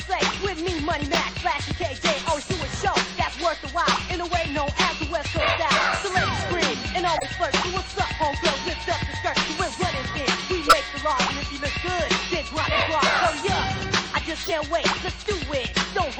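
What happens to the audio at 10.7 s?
At 10.7 s there is a corrupt frame decoded, running from 10.65 to 10.74 s. The decoder played compressed data with flipped bits, so gains and codes were misread and energy landed at the wrong frequencies. The span of about 86 ms suggests roughly three damaged frames. It is heard as a loud chirp, squeak, blip or burst of noise, peaking only a few decibels below full scale, that stops as clean frames resume.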